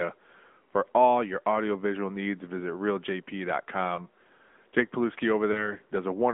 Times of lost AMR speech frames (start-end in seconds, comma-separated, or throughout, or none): 3.96-4.00, 5.52-5.74